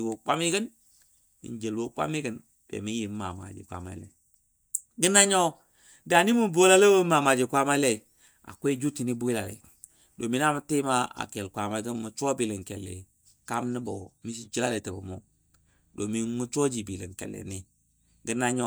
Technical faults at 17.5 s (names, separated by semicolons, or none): none